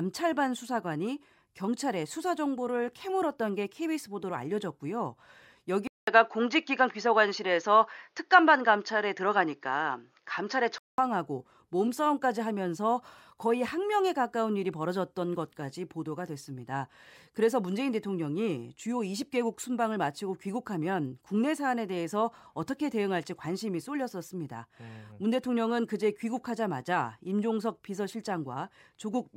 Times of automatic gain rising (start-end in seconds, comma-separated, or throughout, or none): none